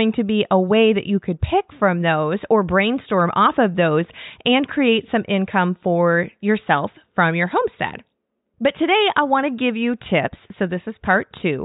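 No technical faults are audible in this speech.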